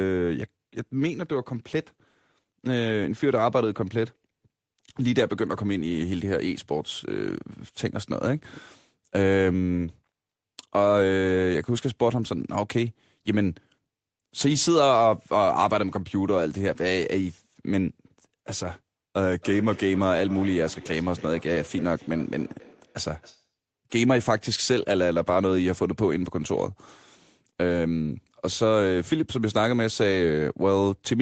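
A speech recording with a feedback echo between two devices from 19.42 to 23.54 s. In that stretch each word comes back, spaced roughly a third of a second apart. The repeats sound thinner and more ringing each time, peaking about 20 dB below the speech. Two devices in the same room are on the call. One plays the other's audio, and that microphone picks it up again. Neither echo canceller removes the other device's playback. The audio tops out near 8 kHz, which fits the call codec's bandwidth.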